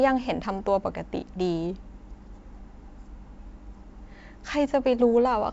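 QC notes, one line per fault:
No fault to note for this speech clip, which is carried by G.722 wideband telephone coding.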